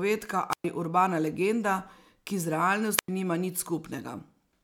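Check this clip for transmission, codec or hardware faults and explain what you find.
Two wireless microphone squelch dropouts interrupt the speech. The first runs from 0.50 to 0.65 s, just before "urbana legenda ki z". The second runs from 2.97 to 3.08 s, just after it. The FM radio link weakens, hiss briefly rises, and the receiver's squelch mutes the output for about 112 ms and then 94 ms. Speech then resumes.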